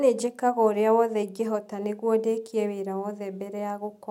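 No technical faults are audible.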